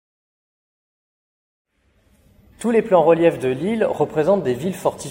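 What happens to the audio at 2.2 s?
At 2.21 s the clip has a brief burst of damaged data in the compressed stream, lasting under 10 ms. Part of the encoded data there was corrupted, so the decoder misread or rejected those frames and had to resynchronise on the next valid frame header. It is heard as a momentary break in the sound. On a waveform it shows as a short discontinuity, and on a spectrogram as a narrow vertical disturbance cutting across the surrounding content.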